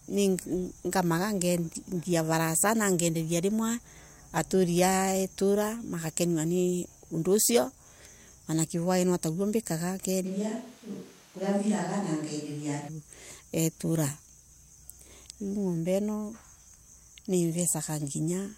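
At 10.27 s the speech suddenly turns roomy and hollow, with thinner bass and background noise rising to roughly 25 dB below the voice, though the level barely changes. It snaps back at 12.87 s, likely a switch to a distant microphone after the close one dropped out.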